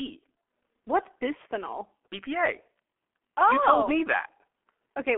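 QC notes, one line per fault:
Throughout: G.723.1 codec. The speech sounds muffled, boxy and hoarse, with consonants smeared and sibilants dulled. Nothing is left above about 3.7 kHz, and the low end thins below roughly 250 Hz, a telephone-line band. The damage is heavy. The coder rebuilds speech from a coarse vocal model refreshed only every 30 ms frame, so fine detail and quick transitions blur, which fits a very low rate near 6.3 kbit/s.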